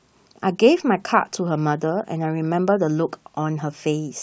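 No technical faults are audible anywhere in this speech recording.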